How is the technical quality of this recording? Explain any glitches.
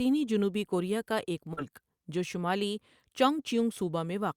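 There's one glitch worth pointing out. Around 1.53 to 1.59 s you get short concealed packet loss: about 40 ms never arrived, so the receiver stretched the preceding sound to cover it, leaving a quick smeared wobble.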